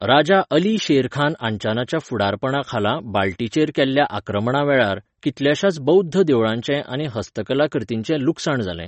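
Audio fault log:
throughout, MP3 compression: The speech has nothing above 8.3 kHz and a plainly audible watery, swirling quality, which is likely MP3 encoding at a low bitrate, one that fits about 32 kbps. Short of bits, the encoder cuts off the top of the spectrum at a fixed point and drops weak frequency lines that flicker in and out between frames. That leaves the treble dull, gives sibilants a metallic chirp and blurs sharp onsets.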